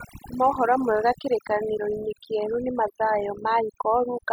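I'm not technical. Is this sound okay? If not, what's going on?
No. The whole clip has overdone noise removal. A cleanup tool was set too strong, so the background sounds oddly twinkly.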